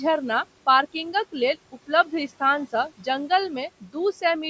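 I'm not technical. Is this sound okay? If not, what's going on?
No. All the way through, the background noise drops away in the pauses and comes back under the speech. These are noise suppressor artifacts. A call's noise-reduction step keeps lowering whatever it judges to be steady background, moment by moment. Because it pushes that noise down hard, the gaps go unnaturally quiet.

Between about 1.72 and 2.12 seconds, brief parts of the speech, adding up to a fraction of that stretch, sound swallowed, as if part of a syllable fell away. This is speech cut by the noise suppressor. The same noise-reduction step mistook some of the softer speech sounds for background and turned them down along with the room noise, so they come through faint.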